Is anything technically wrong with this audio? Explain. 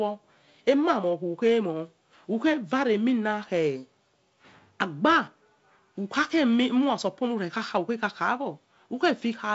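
No, nothing is technically wrong with this speech. It carries the signature of G.722 wideband telephone coding, with content stopping at about 7.7 kHz and only light coding grain, which fits the 48 kbit/s mode.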